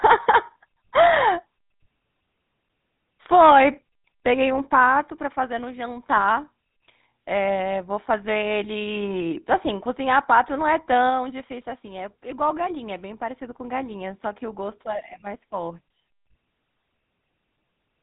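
From start to finish the speech has a buzzy, gravelly roughness, clearly audible, with the top end gone: nothing survives above about 3.8 kHz, so sibilants and breath sound dull and boxed-in. This is GSM full-rate codec damage, and the character fits the original 13 kbps GSM coder. It reduces the voice to a vocal-tract filter fed by a sparse, evenly spaced pulse excitation, and that coarse pulse train is what puts the grit into every vowel.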